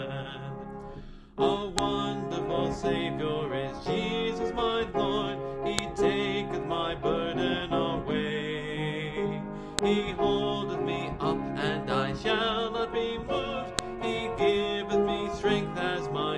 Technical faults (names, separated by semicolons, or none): file header played as audio